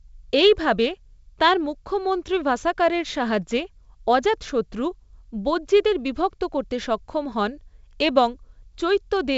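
No technical faults can be heard in this recording.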